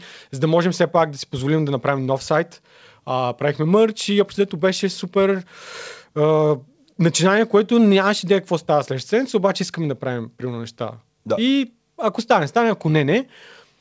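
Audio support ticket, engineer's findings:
Nothing stood out on listening to the speech; the band tops out at 8 kHz, as expected from the G.722 call path at 64 kbps.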